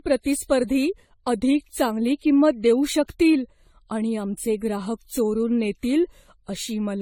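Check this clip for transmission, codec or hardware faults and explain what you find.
The speech carries one fault across its whole length: generation loss, most likely from repeated lossy coding. It sounds swirly and hollow, with smeared consonant attacks. The character points to an AAC-LC chain near 64 kbit/s, decoded and re-encoded around ten times. Each pass requantises on a shifted frame grid, so noise and spectral holes stack. A single 64 kbit/s encode would be cleaner than this, and the band still reaches about 19.2 kHz, so the bandwidth limit doesn't explain the degradation.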